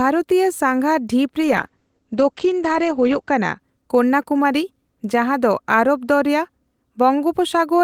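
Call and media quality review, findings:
Call bitrate drop, 1.41–3.65 s. Speech turns coarse and muffled, with top end cut near 8 kHz (full band up to 20 kHz before and after). Probable component: Opus encoder after a bandwidth-estimate fall. The sound fits a cut from about 32 kbps to about 11 kbps, held at the floor for about 1.9 s, with coarser coding and a band-limited mode until the rate recovers.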